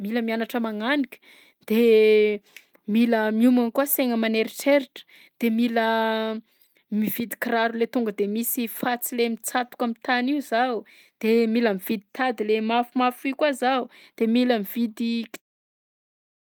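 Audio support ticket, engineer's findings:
Nothing to flag on this speech clip; the only change in level is a gentle editor-style fade-out around 15.4 s, which is intended and carries no click or hard edge.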